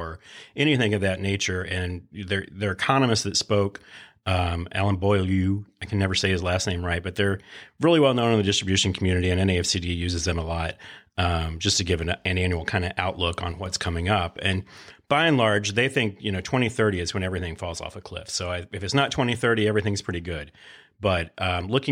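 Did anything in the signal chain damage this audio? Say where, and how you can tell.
Yes. At 13.52 to 13.66 s the speech level drops abruptly by about 6 dB for roughly 0.14 s, then returns just as suddenly. This is a case of one channel dropping out. When a stereo signal is summed to mono, material common to both channels falls by half its amplitude if one side goes silent, and anything present only on that side vanishes. The likely stage is the analogue wiring, such as a momentarily intermittent connector on one leg.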